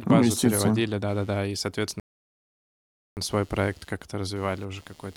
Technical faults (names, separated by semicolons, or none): computer activity noise; rebuffering stall